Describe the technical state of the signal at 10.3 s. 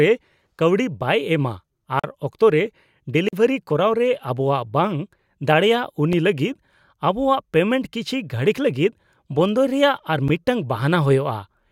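A block of digital silence sits at 10.28 s, lasting about 10.7 ms, which fits a 512-sample buffer. The speech signal drops straight to silence and then returns with no fade on either side. That most likely happened because the output buffer was not refilled in time. With a hole this short, it is heard as a tick or dip rather than an audible gap in the speech.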